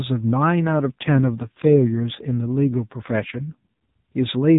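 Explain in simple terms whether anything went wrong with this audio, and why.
An AMR rate drop runs from about 0.6 s to 3.86 s. This speech travels through a mobile-phone speech codec, which already cuts off everything above 4 kHz. Partway in, the network switches it to a much leaner setting, spending more of its capacity on protecting against transmission errors and less on the sound itself. The voice keeps the same muffled phone bandwidth and never breaks off, but turns buzzier and more synthetic until the fuller setting returns near 3.86 s.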